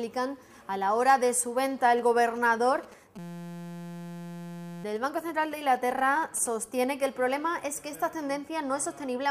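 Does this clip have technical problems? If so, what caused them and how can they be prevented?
Yes. GSM signalling bursts run from 1.98 to 6.48 s. A nearby 2G phone sending short groups of radio bursts, as it does while signalling to the network, is rectified by the audio circuitry, giving a galloping dit-dit-dit of brief buzzes at 216.7 Hz, roughly 20 dB below the sound. To prevent it, keep mobile phones away from the recording chain or switch them to flight mode, and use shielded, balanced cabling.

A system hang loop occupies 3.19 to 4.84 s. The computer or driver stalled while the sound hardware kept replaying its ring buffer, so one 5.8 ms slice of audio repeats exactly, about 285 times, heard as a steady buzz at 172 Hz. That loop length fits a 256-sample buffer. To prevent it, use stable audio drivers, avoid CPU or system overload during recording, and keep firmware updated.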